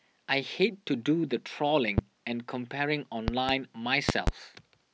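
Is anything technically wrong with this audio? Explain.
Yes. A sudden voltage spike, likely from a plug, switch or static discharge, entered the signal path, producing loud pops: one at 1.98 to 2.01 s, then double pops at 3.28 to 3.52 s and 4.09 to 4.31 s, roughly 20 to 25 dB above the speech, which continues underneath.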